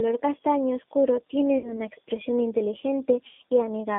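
From start to finish the speech carries the G.729 codec's plainly audible damage. Everything sits inside a telephone band of about 200 Hz to 3.4 kHz, with nothing above 4 kHz, and the voice has the slightly rough, synthetic edge of an 8 kbit/s coder that rebuilds each 10 ms frame from a vocal tract filter, a pitch predictor and a few pulses. A plain band-limit would only muffle the sound. This grainy, reconstructed texture is what points to the codec itself.

Right after "castaño oscuro", from 1.58 to 1.80 s, comes VoIP packet loss concealed by the speech codec. About 60 ms of audio went missing, which fits two lost packets. The decoder filled the gap by stretching its last pitch and filter settings, so the sound smears into a buzzy tone or coloured noise that fades instead of dropping out. The weakness lingers after the loss because each frame builds on the one before. A simple dropout would leave silence or a click.

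A second concealed loss runs from 3.27 to 3.41 s. This one covers about 120 ms, which points to four packets. Because the gap is longer, the extrapolated sound decays further before real speech resumes, and the speech stays weakened and distorted for a while afterwards.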